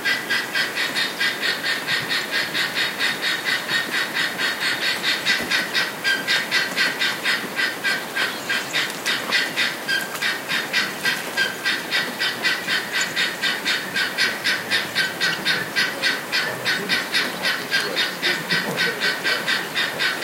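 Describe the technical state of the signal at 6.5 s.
At 6.5 s the signal is intact, with no dropout, distortion, glitch or other technical fault audible at that moment.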